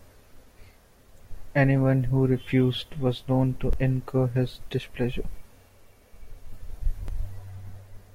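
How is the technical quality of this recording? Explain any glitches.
The recording has three brief glitches, all of the same kind: a dropped buffer (overrun). At 3.73 s, between "was known to" and "incur his", and at 4.80 s, just after "known to incur his", the speech jumps forward by about 10 ms. At 7.08 s there is a longer skip of about 30 ms. The likely cause is software failing to collect audio before the hardware overwrote it. Unlike a dropout, no silence is left behind, and the sound simply skips ahead.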